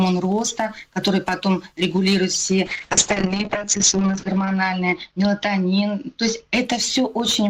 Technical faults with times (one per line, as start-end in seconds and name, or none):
2.67-6.85 call bitrate drop